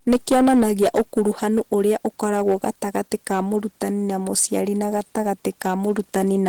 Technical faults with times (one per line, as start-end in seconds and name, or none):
0.00-6.48 hard clipping
0.00-6.48 Opus compression